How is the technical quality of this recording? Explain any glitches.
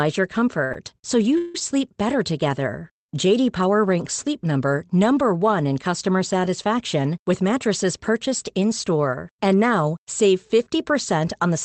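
The recording has two timing glitches typical of a network call, with the audio band-limited to around 8 kHz, consistent with a call codec such as Opus at a low bitrate.

From 0.64 to 0.71 s, just before "so you", there is a short stall from a late packet. The jitter buffer ran empty and the receiver stretched the last sound for about 61 ms until the packet arrived. Nothing is lost, but the sound is held slightly too long, with a slight buzz or dip.

From 1.38 to 1.55 s, right after "so you", there is a call audio freeze. The last sound is extended for about 166 ms as a fading buzz or hiss, without dropping to silence, before speech resumes where it stopped. The likely cause is packets delayed in transit, leaving the jitter buffer empty until they arrived.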